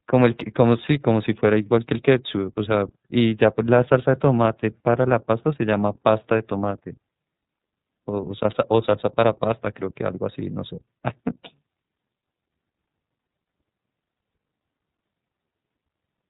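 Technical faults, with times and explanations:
Throughout, iLBC codec: the whole speech track has that narrowband VoIP sound, with nothing above 4 kHz, and a plainly audible rough, slightly synthetic edge, because each short frame's excitation is coded on its own. The texture fits 30 ms frames at around 13.33 kbps.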